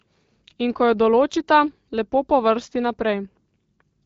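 The speech carries the band-limited, lightly coded character of AMR wideband (HD Voice) at a rate that sounds like 12.65 kbit/s, with no faults anywhere in the signal.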